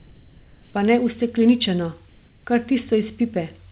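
In these few seconds of speech, the background from 0 to 0.74 s and again from 2.09 to 2.45 s goes flat and featureless, about 3 dB and 4 dB quieter than the real room tone, itself about 32 dB below the loudest passages. That is comfort noise in place of the background, likely from discontinuous transmission, with the receiver synthesising noise during pauses. The band stops at 4 kHz, consistent with a G.711 A-law call path.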